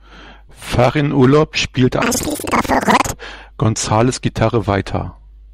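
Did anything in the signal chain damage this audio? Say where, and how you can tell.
Yes. From 2.02 to 3.20 s the speech jumps an octave high with a flutter near 11.7 Hz. This is planar audio read as interleaved at the driver or buffer stage: each block of about 85 ms, which fits a 4096-sample block, plays left then right at double speed.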